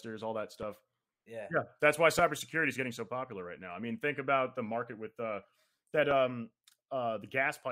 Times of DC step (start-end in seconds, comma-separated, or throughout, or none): none